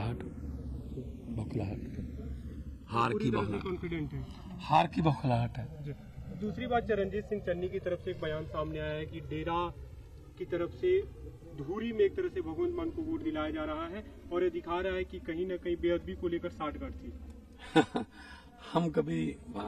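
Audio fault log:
Throughout, channels drifting apart: a slow flanging sweep across the clip, left by the two channels having been summed to mono. The left and right channels appear to run on separate clocks that disagree by roughly 200 parts per million, so the offset between them creeps steadily and reaches about 4 ms by the end. As that delay slides, the comb-filter notches it creates move gradually through the spectrum, producing the moving, swirling tone.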